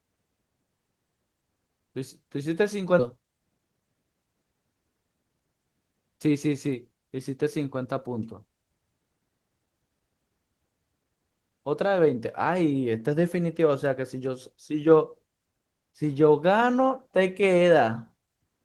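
Speech, with a skip ahead at about 2.99 s, where roughly 0.4 s of audio vanishes and the waveform splices abruptly with no gap, a hard seam on the spectrogram. From 3.09 to 3.95 s, a jitter buffer speed-up trims pitch periods, running about 10% fast at unchanged pitch; the harmonics stay level while syllables look compressed.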